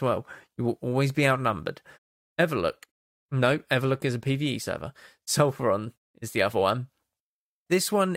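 No faults are audible anywhere in this speech clip.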